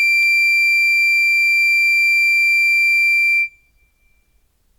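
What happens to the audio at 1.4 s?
Nothing goes wrong at 1.4 s; the music plays through that moment intact, with no dropout, click or distortion to be heard.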